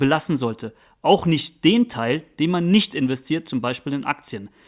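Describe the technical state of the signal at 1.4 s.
At 1.4 s the speech signal is intact, with no audible fault at that moment.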